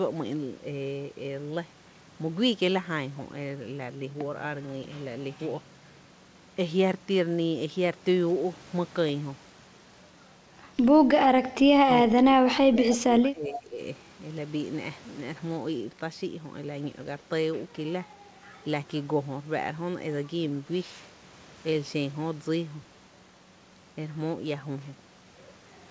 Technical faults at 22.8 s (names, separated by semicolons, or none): none